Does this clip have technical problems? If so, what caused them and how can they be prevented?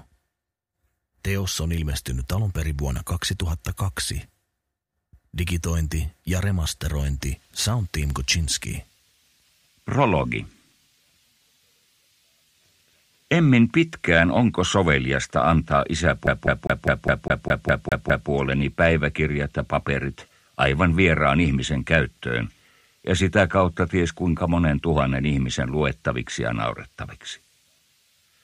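Yes. From 16.27 to 18.30 s the audio gets caught in a CD stuck on one turn. The same 0.20 s slice plays ten times in a row, each pass ending in a brief dropout before it starts again, giving that quick, machine-regular stutter. A scratch keeps knocking the laser back a track at the same spot on every rotation. To prevent it, rip from a clean, undamaged disc with an error-correcting ripper instead of playing it live.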